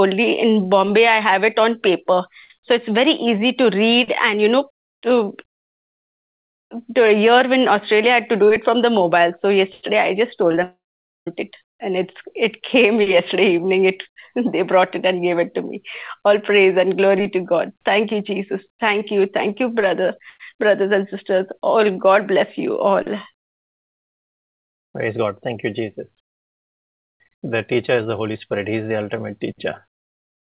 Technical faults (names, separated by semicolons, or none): short concealed packet loss; long network dropout